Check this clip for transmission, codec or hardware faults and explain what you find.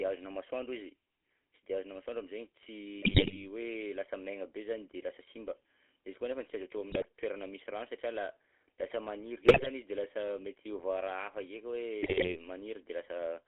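Two faults are present. The speech runs through a GSM full-rate codec for its whole length, and GSM bit errors break it up four times.

The GSM full-rate codec colours the entire clip. The coder models the vocal tract as a filter. It excites that filter with a sparse train of regular pulses instead of the real waveform. The voice therefore sounds buzzy and gravelly. The band is closed off at about 300 Hz and 3.4 kHz, so the speech is thin and muffled. The damage is plainly audible, which fits the 13 kbps full-rate coder.

GSM bit errors strike at 3.02 to 3.43 s, 6.90 to 7.08 s, 9.44 to 9.67 s and 12.02 to 12.39 s. Each burst lasts between roughly 0.2 and 0.4 s. Corrupted bits reach the decoder and spoil its filter, pitch and gain values. Frames then come out with a warped spectrum or a sudden jump in level. The speech turns into squawks, pops and gargling. The error density suggests a link corrupting a few percent of its bits.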